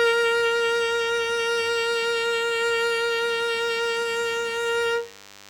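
Throughout the music runs a DECT cordless phone buzz, a thin, steady rasp well below the music. A nearby handset or base pulses radio bursts 100 times per second, and the audio circuit rectifies them. Its dense, harmonic-rich edge distinguishes it from smoother mains hum.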